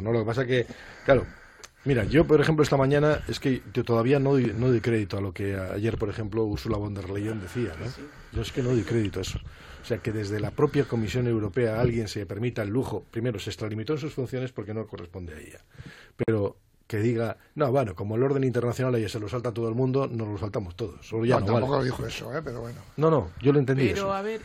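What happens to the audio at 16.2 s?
A gap at a join of encoded pieces, 16.23 to 16.28 s: encoder padding leaves a 48 ms dropout, seen as a blank vertical stripe with slightly smeared edges.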